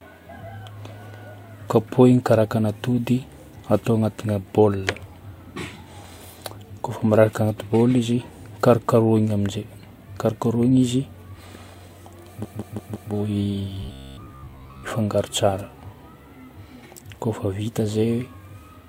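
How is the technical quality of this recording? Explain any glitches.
Two glitches show up close together near the end of the speech.

From 12.42 to 13.10 s there are repeated frames: a 170.7 ms chunk plays four extra times, a stuttering loop that adds about 0.68 s.

From 13.83 to 14.91 s there's a robotic sound, likely from repeated short buffers. A roughly 15 ms slice loops, forcing a rigid, metallic 66.8 Hz buzz over about 70% of that stretch.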